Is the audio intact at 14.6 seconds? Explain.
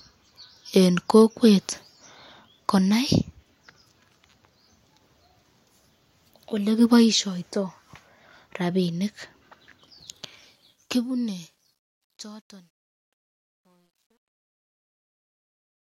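No. At 14.6 seconds the clip is inside a stretch of truncation distortion on a fade, which runs from 10.12 s to the end at 15.83 s and is worst from 12.09 s onward. As the fade-out drops toward silence, the level is rounded to coarse steps without dither, consistent with about an 11-bit word. The quiet tail sounds gritty. The waveform shows staircase-like square steps, and a spectrogram shows broadband hash.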